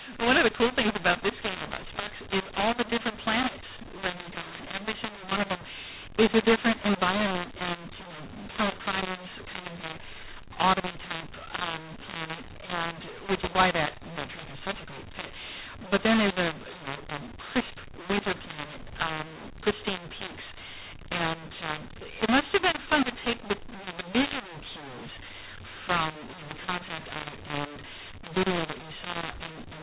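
From start to finish, the audio suffers a mu-law and A-law mix-up. The speech was coded with mu-law but decoded as A-law. The two laws map their 8-bit codes to levels differently, so every sample lands at the wrong level. Some peaks swell, others shrink. The quietest samples jump well above silence. The result is harsh, gritty distortion over the speech, and the pauses fill with hiss. The narrow band, with nothing above 4 kHz, points to ordinary telephone coding.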